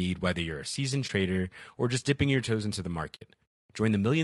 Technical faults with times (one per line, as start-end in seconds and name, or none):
0.00-4.24 low-delay AAC compression
1.07-1.10 AAC frame loss with muting
3.15-3.22 AAC frame loss with muting